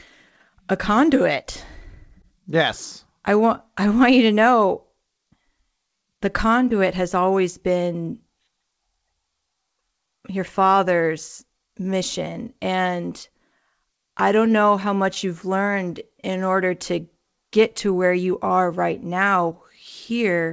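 The sender's clock runs about 2% slower than the receiver's, so there is clock drift between sender and receiver: the jitter buffer keeps draining, and the speech is stretched throughout. From 0.50 s to 20.18 s, repeated timing corrections insert short repeated pieces, adding roughly 300 ms. The speech plays at about 98% speed, with faint, unevenly spaced hiccups in its pace. Through the G.722 call path, nothing is heard above 8 kHz.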